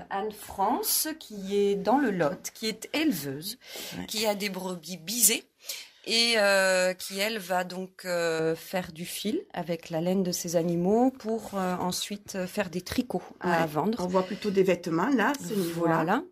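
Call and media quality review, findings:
Pre-emphasis left on, 4.11–8.39 s: treble boost applied upstream with no matching de-emphasis. Lift of about 11 dB at 10 kHz over 1 kHz, shape fitting a J.17 curve. Sound turns thin, bright, harsh on sibilance.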